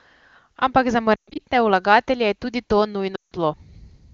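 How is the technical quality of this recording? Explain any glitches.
The speech comes through clearly with full wideband bandwidth, which fits AMR-WB at a high rate, but two glitches come from lost AMR speech frames. From 1.16 to 1.41 s, about 180 ms of frames are lost in scattered runs, the longest 120 ms. From 3.15 to 3.33 s, right after "je tudi to", 160 ms is lost. The decoder repeats the last good pitch and vocal tract settings with falling gain, so the sound drops to near silence within two frames instead of cutting abruptly to silence as a plain dropout would.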